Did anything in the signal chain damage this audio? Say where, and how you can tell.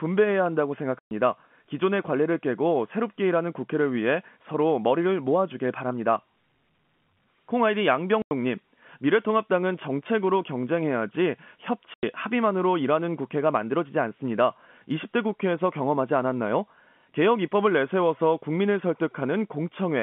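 Yes, packet loss filled with silence on the network: hard-edged gaps at 0.99–1.11 s (120 ms), 8.22–8.31 s and 11.94–12.03 s (90 ms each) chop the speech, which points to 30 ms packets.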